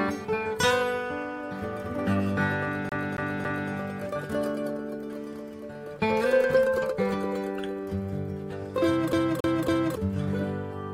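A CD stuck on one turn, with the laser jumping back a track, replays the same 0.28 s slice three times with brief mutes, from 2.89 to 3.72 s and again from 9.13 to 9.96 s.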